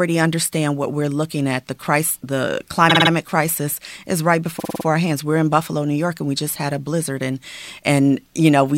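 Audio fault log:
2.89–3.10 s, repeated frames: a 52 ms block replays four extra times, heard as a stutter, adding 0.21 s.
4.59–4.85 s, repeated frames: the same 52 ms block length repeats five extra times, adding 0.26 s.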